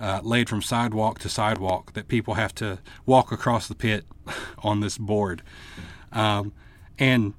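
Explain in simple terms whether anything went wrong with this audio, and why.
Yes, something did go wrong, and it's easy to spot. Between about 1.56 and 1.72 s there's a loud pop, actually two sharp pops in quick succession, sitting well above the level of the speech. The speech keeps going underneath without a break. That pattern points to a sudden electrical jolt getting into the signal, likely from a cable being bumped, a switch, or a burst of static, which the gear then shapes into a thump.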